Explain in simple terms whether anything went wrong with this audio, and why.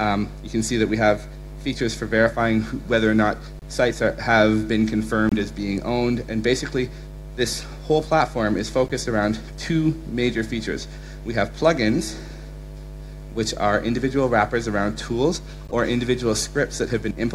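Five short glitches come from a corrupt frame decoded, at 3.59–3.64, 5.29–5.33, 7.61, 8.88–8.91 and 15.67–15.73 seconds. Damaged chunks of the compressed file were played anyway. Sound lands at wrong pitches. Each is heard as a chirp, squeak, blip, noise burst or brief gap.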